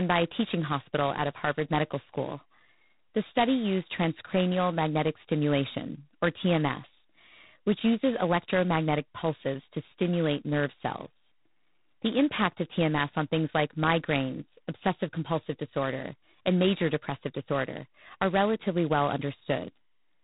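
From start to finish the speech carries heavy G.726 ADPCM damage. The coder sends only a few bits per sample describing the gap between the signal and its own running prediction, and here the coarse steps, which fit the 16 kbit/s mode, leave a harsh, rasping hiss that swells and fades with the speech level. A spectrogram shows a hard ceiling at 3.9 kHz, with a grainy noise floor filling the bands beneath the voice.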